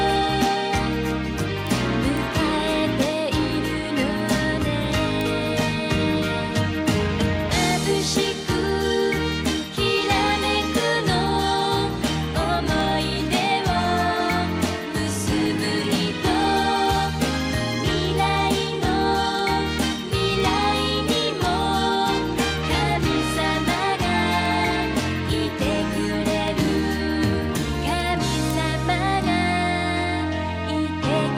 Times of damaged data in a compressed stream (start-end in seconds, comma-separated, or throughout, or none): none